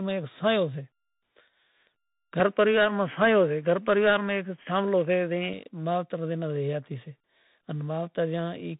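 From start to end the speech carries tandem speech coding: it sounds rough and noisy, with nothing above 3.8 kHz. The grainy slope-overload texture points to CVSD applied twice, with an A-law hop between, each coder degrading the previous one's output. Unlike a device change, this stays constant throughout.

Between 2.40 and 5.53 s the band narrows further, with nothing above 3.3 kHz. The level shifts by roughly 5 dB, and a faint new noise floor sits well below the speech. The sound then recovers, with no silence at either switch. This is most likely an input switched to a poorer device. The time-bounded change in tone, level and noise separates it from the steady codec roughness.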